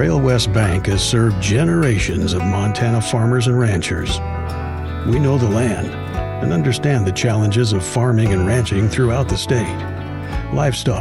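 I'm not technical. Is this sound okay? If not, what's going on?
Yes, this sound is okay, and nothing in it points to a technical problem. You don't need to worry about anything going wrong during playback.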